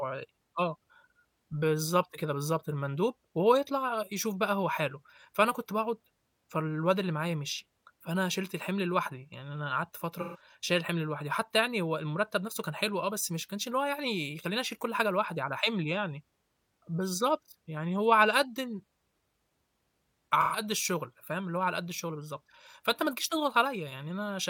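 At 10.20 s the speech smears into a brief noisy, phasey patch until 10.41 s. The same thing happens from 20.40 to 20.60 s. Both are AAC frame loss with concealment. In each case about 128 ms of coded audio went missing, which fits three lost frames. The decoder covered the gap by reusing the last good spectrum with altered phase and energy. Both gaps are short, so neither fades to silence.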